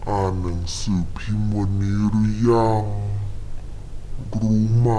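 Throughout, a wrong sample rate halves the speed and drops pitch one octave. This fits 44.1 kHz audio played at 22 kHz. Speech sounds slow and deep.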